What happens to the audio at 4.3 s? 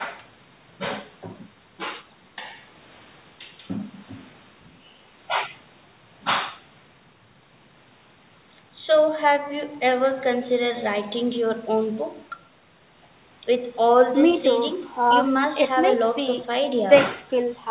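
Nothing goes wrong at 4.3 s: the speech carries on intact through that moment, with only the narrow telephone-band sound of the call path, which is normal for it.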